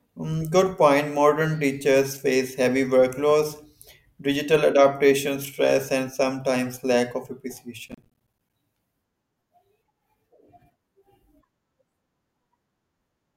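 At 7.88 s, after "and sometimes lack of", the processor fell behind and missed about twenty buffer deadlines of roughly 10 ms each. Every miss leaves a hard-edged gap of silence, so the speech carries gritty processor overload crackle until 8.53 s.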